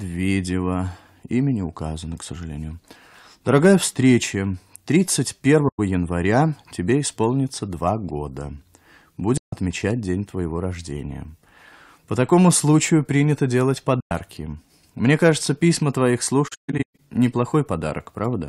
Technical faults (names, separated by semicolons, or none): AAC frame loss with muting